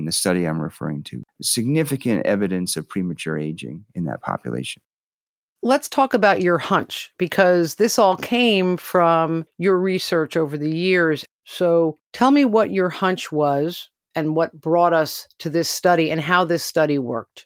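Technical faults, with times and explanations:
No technical faults are audible.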